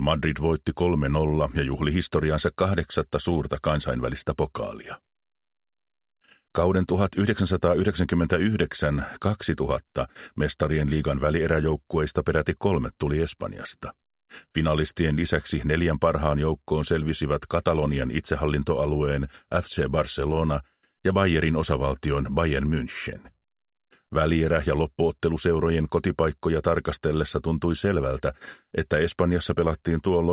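Nothing stood out on listening; the sound comes across as expected for a call line, with the usual narrow band that stops at about 4 kHz.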